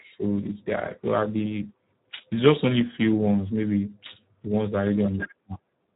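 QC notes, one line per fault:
throughout: Speex codec, speech starved of excitation bits turns hoarse, fitting an 8 kbps setting; nothing above 3.8 kHz.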